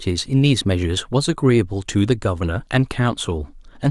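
From the start of the speech right through to the end, there's a steady buzz riding on it, and it points to the resampler restarting on every block. Each 20 ms chunk going from 44.1 kHz to 48 kHz was converted on its own, leaving a tiny error at every edge. That gives ticks at 50 Hz, heard as a buzz wherever there's signal.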